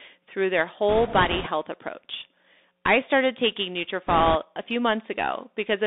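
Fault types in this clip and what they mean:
Bluetooth CVSD headset codec: one-bit delta coding confines the speech to roughly 250 Hz–3.7 kHz, with scratchy sibilants and granular hiss, fitting a 64 kbps link.
Bit errors on a Bluetooth voice link: flipped bits add rushing crackle after "through their" and again before "a few", at around a few percent error rate, without sharp clicks.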